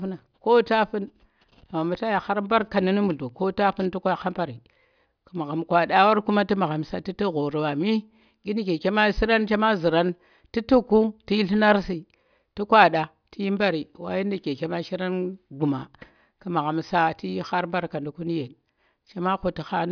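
No faults detected anywhere in this speech recording.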